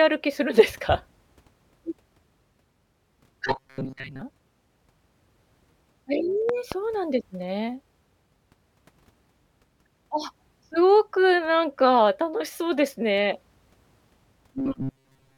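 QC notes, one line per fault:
3.47–4.22 s and 14.58–15.38 s, robotic sound from repeated short buffers: rigid metallic buzz at 133 Hz, likely from a 7.5 ms block being looped while most of the real audio is skipped.
6.49–6.74 s, loud pop: two sharp pops roughly 10 dB above the speech, which continues underneath, likely a voltage spike from a switch, plug or driver glitch.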